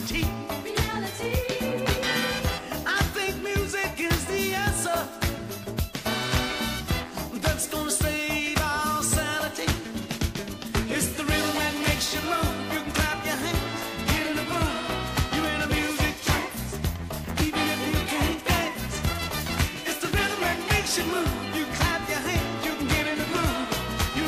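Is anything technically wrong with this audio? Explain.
No, nothing stood out as technically wrong when listening to this audio.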